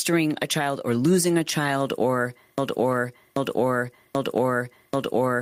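Throughout the speech, the input gain is likely set far too high, with a fast limiter hauling it back on every loud syllable. This gain pumping swings the level by about 10 dB, leaving the dynamics squashed.

From 2.58 s to the end, the stream or player likely stalled and kept resending its last buffered fragment. The result is a broken-record loop: a piece about 0.79 s long repeats exactly, back to back, and whatever should have followed never arrives.

At 3.85 s, just after "or losing a child", a 20 ms stretch sounds rougher and noisier than its neighbours. This points to one lost packet that was rebuilt from error correction, with the decoder filling the gap from a low-bitrate copy carried in the following packet.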